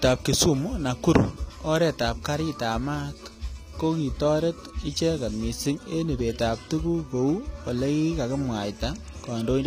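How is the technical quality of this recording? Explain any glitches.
Technical quality is poor, with plainly audible codec damage through the whole speech clip. The likely cause is HE-AAC compression. The codec keeps only the lower spectrum and rebuilds the treble by copying lower bands upward. The copied treble is bright but not true, so harmonics misalign where the two regions meet. S sounds turn gritty and metallic. Nothing remains above 15.5 kHz. The damage fits a low bitrate of about 24 kbps.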